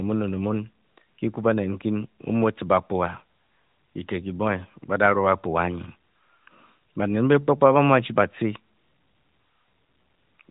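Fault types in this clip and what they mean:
No faults can be heard in the speech. The band stops at about 4 kHz with only light codec colouring, which fits an AMR narrowband mobile link at its 12.2 kbps mode.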